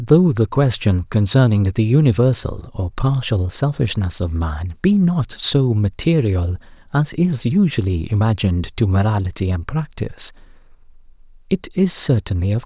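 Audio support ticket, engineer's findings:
No faults found.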